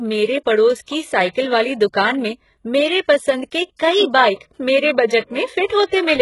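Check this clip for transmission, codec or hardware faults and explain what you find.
There is one fault, and it runs through the whole speech clip: heavy HE-AAC compression damage, with nothing above 11.5 kHz. The cause is likely HE-AAC coding at a very low bitrate, around 12 kbps. Only the lower band is truly coded, and the treble is rebuilt by copying lower bands upward. S sounds therefore turn gritty and metallic rather than simply dull. That synthetic, mismatched brightness separates it from a plain low-pass cut.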